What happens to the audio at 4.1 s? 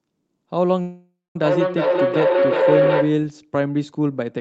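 At 4.1 s the speech carries on intact, with nothing more than the 8 kHz upper limit of the Opus call path that runs through the whole clip.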